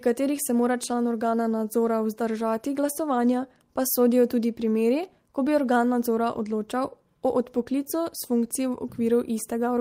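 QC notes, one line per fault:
No technical faults were found in this speech recording.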